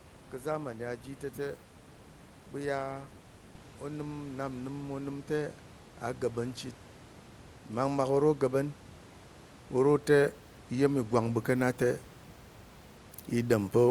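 This speech clip has two stretches of automatic gain rising. From 3.62 to 5.58 s, just before "a ga̱ɓa̱n chit", the level creeps up about 5 dB, then again from 9.71 to 12.08 s by about 4 dB. The AGC thought the input was too quiet, so voice and room noise swell together.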